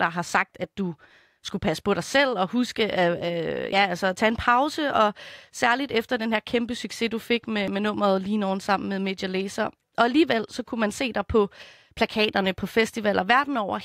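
At 3.73 s, just before "altså at tage en", the speech skips forward. It skips again at 7.68 s, between "kæmpe succes du fik" and "med nummeret lige nogen". Each gap drops around 50 ms, with no silence in between. This is likely audio missing between chunks, with a recorder working in roughly 4-second blocks.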